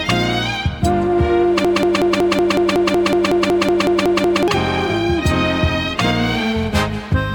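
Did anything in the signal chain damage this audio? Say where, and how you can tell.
Yes. Between 1.65 s and 4.48 s there's a broken-record loop: a 185 ms fragment repeats back to back, fifteen times, identical each pass. That's likely a stalled player or stream buffer re-sending its last chunk, so the audio meant for those seconds is gone.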